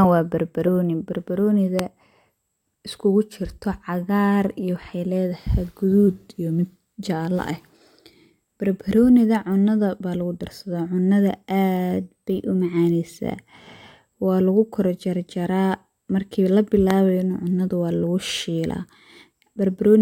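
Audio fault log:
1.79 to 1.81 s and 16.91 to 16.93 s: loud pop, a single sharp pop each time, peaking roughly 20 dB and 15 dB above the speech, which continues underneath. This is likely a voltage pulse from a switch, plug, static or driver glitch entering the signal path.
6.07 to 6.74 s and 11.97 to 12.77 s: drift correction step. Playback speed drops 5.75% with pitch falling about 103 cents, then later rises 5.75% with pitch up about 97 cents, each time snapping back. This roughly one-semitone detuning likely comes from clock-matching software resetting its buffer level.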